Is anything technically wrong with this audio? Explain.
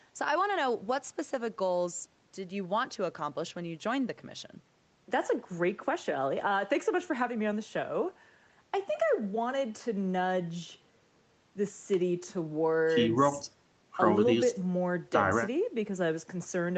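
No, nothing in this speech recording points to a technical fault. It has passed through call microphone processing, so the lowest bass has been trimmed away and nothing sits above 8 kHz, which is what that path does when working normally.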